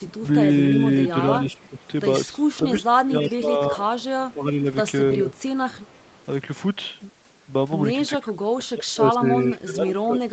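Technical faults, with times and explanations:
1.08–1.87 s, 2.55–3.36 s, 5.32–6.25 s: echo leak. A distinct delayed copy of the speech trails by 327 ms, about 20, 15 and 35 dB down, likely from uncancelled loudspeaker pickup. This is a separate repeat, not a smeared reverberant tail.
1.12–1.81 s, 2.34–5.29 s, 8.07–10.33 s: speech suppressed in double talk. The level dips in pieces by roughly 15 dB, and by about 25 dB in the last stretch, likely because the echo canceller ducked the talker during overlap. These are partial dips, not clean dropouts.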